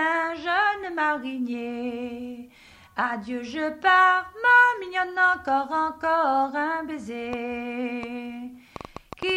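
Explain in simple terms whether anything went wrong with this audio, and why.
Near the end, from 7.33 s to 9.30 s, a burst of sharp ticks and pops sits on top of the sound: about ten of them, roughly four per second but at an uneven pace, each much like the last and loud enough to stand out clearly. This is a train of clicks. Something was injecting short pulses into the signal over those two seconds, likely electrical interference from nearby equipment or a faulty connection or power supply.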